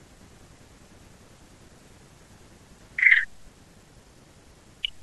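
No technical faults are audible anywhere in this speech recording.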